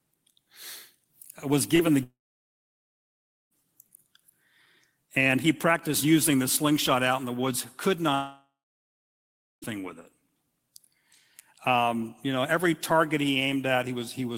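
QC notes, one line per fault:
1.75–1.82 s, short concealed packet loss: about 40 ms went missing and was bridged by extending the preceding sound, heard as a brief smear rather than a gap.
2.03–3.54 s and 8.15–9.65 s, long network dropout: the sound carries on as a fading buzz, then roughly 1.4 s and 1.1 s of silence before resuming with audio lost, likely from a network outage.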